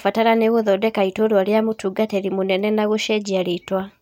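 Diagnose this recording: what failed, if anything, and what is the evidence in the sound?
Nothing in this speech recording points to a failure at any stage, so there's no fault to diagnose here.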